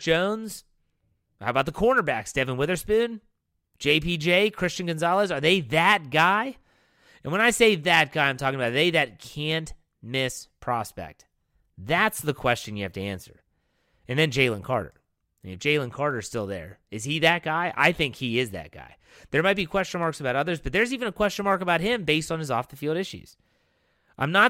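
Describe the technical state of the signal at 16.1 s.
Dropped samples at 16.11 s, just before "still there is he": a couple of samples are likely missing from the stream, so the waveform leaps to a later value. The gap is far too brief to remove sound but gives one sharp click, a thin vertical spectral line.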